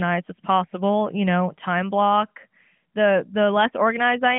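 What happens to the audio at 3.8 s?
Nothing goes wrong at 3.8 s: the speech carries on intact through that moment, with only the narrow telephone-band sound of the AMR narrowband mobile codec, which cuts everything above about 3.5 kHz.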